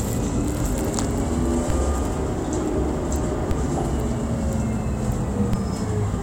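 At 1.70 s the zero line of the waveform suddenly jumps, a DC step of about -12 dBFS, and you hear it as a low thump while the sound carries on untouched. The offset doesn't hold. It bleeds away the way a 20 Hz high-pass would drain it, so the baseline drifts back to centre. The same thing happens at 3.51 s, again about -12 dBFS, and at 5.53 s, slightly stronger at about -11 dBFS.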